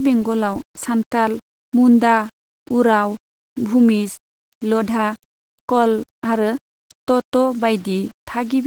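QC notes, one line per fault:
Throughout, low bit depth without dither: the speech carries a grainy, signal-following distortion that rises and falls with the level, roughening quiet syllables and sputtering in the softest tails, with the error sitting roughly 30 dB below the signal. That is what coarse rounding to a few levels does, likely a 7-bit word with no dither. Unlike steady hiss, the grit vanishes in true silence and changes character with each sound rather than staying constant.
Throughout, Opus voice compression: the speech sounds hoarse and slightly robotic, with plainly audible coding damage in the texture of the voice, consistent with hybrid-mode Opus at about 16 kbps working in 20 ms frames. The lower band is modelled by linear prediction with a coarsely coded excitation, which gives the buzzy, synthetic edge, and a thin transform layer covers the top. The band still reaches about 20.1 kHz, so this is not the dull, narrowed sound of band-limiting. 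The damage sits in the timbre, not in any missing highs.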